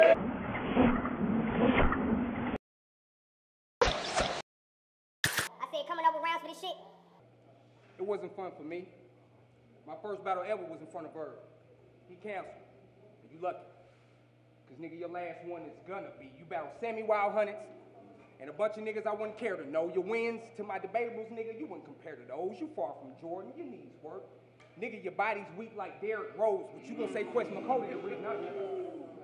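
A wrong sample rate runs from 3.87 to 7.20 s. For this stretch the samples are clocked out faster than they were captured, with no conversion between the two rates, so the sound moves about 1.45 times faster and sits about 6.45 semitones higher, both shifting together. That ratio fits audio recorded at 22 kHz but played at 32 kHz. The result is a sped-up, raised-pitch passage that snaps back to normal pace and pitch at 7.20 s.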